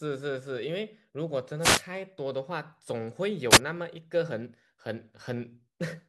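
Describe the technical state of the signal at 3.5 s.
At 3.5 s the speech is hit by a wireless microphone noise hit running from 3.51 to 3.58 s, about 70 ms. The FM radio link briefly fades as reflected signals cancel at the receiver, so its noise floor surges, producing a short swish of static over the voice. On a spectrogram this shows as a brief broadband vertical smear; the waveform carries a burst of dense, jagged noise.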